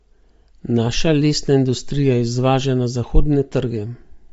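Bluetooth LC3 compression runs through the whole speech clip, likely from a low-rate LE Audio link. Nothing sounds above 7.7 kHz, and the upper band has a breathy, grainy noise fill where detail was discarded. The damage is plainly audible and fits 32 kbps in 10 ms frames.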